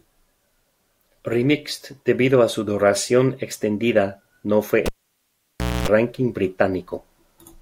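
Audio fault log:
4.86–5.88 s cable pulled and plugged in: pop after "su duración extendida no", 0.97 s near silence, 0.25 s of 60 Hz buzz as the bare tip touches, closing pop.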